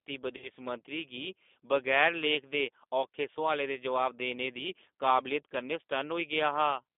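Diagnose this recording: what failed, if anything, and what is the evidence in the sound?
The codec stage is at fault throughout. The speech runs through a G.729 codec, and the damage is plainly audible. The band sits between about 250 Hz and 3.6 kHz, with nothing above. The voice sounds rough and slightly synthetic. This points to an 8 kbit/s G.729A coder. It rebuilds each 10 ms frame from a vocal tract filter, a pitch predictor and a few pulses. It does not carry the real waveform.

At the network stage, packets drop out between 0.37 and 0.49 s. This is VoIP packet loss concealed by the speech codec. The gaps add up to about 60 ms, scattered over 80 ms, and the longest run lasts 30 ms. That fits about six lost 10 ms frames. The decoder fills each hole by extending its last pitch and filter at falling gain. The speech briefly turns into a fading buzzy tone or coloured noise, and it stays smeared for a moment after packets return.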